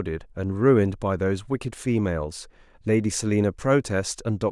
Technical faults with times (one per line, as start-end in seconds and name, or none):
none